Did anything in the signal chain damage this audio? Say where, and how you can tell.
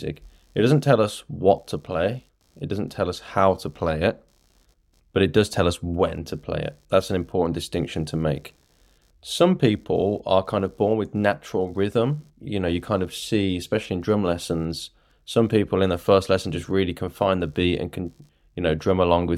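Yes. In the analogue wiring, the computer's changing processor, graphics or mouse load shifts the ground shared with the audio circuit, causing computer activity noise. A faint buzzing pulse, around 70 times a second and far below the speech, runs through the whole clip, independent of the talking.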